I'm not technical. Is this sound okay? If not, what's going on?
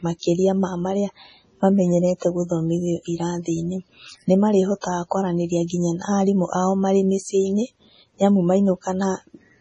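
No, not quite. Throughout, the speech has a watery, swirly quality, and the crisp top end is missing: nothing reaches above about 10.5 kHz, so s sounds come out dull with metallic chirps. That is most likely MP3 compression squeezed very hard. What sets it apart from a simple muffled recording is the warbling. Quiet details flicker in and out from moment to moment instead of just sounding softer.

There are also three spots of pre-echo, at 2.19 to 2.22 s, 4.81 to 4.84 s, and 5.67 to 5.70 s (just before "na arimũ ao marĩ"). Each is a brief hiss lasting about a fortieth of a second that arrives just ahead of a sharp sound, which then lands softened. Unlike a click or background noise, it always comes right before an attack, as if the sound were smeared backwards in time.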